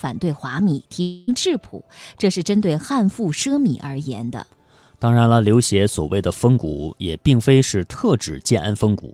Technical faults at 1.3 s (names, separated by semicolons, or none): long network dropout